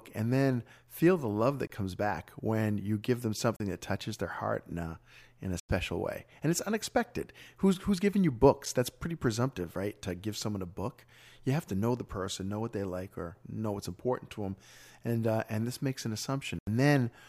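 Speech with five blocks of digital silence: hard dropouts at 1.67 s (23 ms), 3.56 s (36 ms), 5.60 s after "in a" (93 ms), 8.65 s (7 ms) and 16.59 s (84 ms), consistent with output buffers not filled in time.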